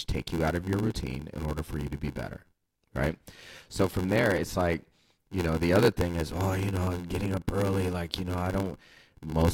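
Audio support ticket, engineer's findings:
Block size mismatch (padded), whole clip: 86.1 Hz buzz, speech at 0.861x speed, timbre intact. Waveform: regular short gaps; spectrogram: vertical stripes. Fits 512-sample reads.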